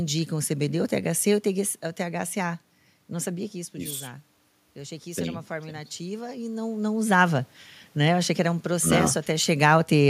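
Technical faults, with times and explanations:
3.23 to 6.7 s, automatic gain rising: when the talker moves away from the microphone at around 3 s and the input falls by about 12 dB, the gain control slowly raises its gain by about 5 dB, so voice and room noise swell together.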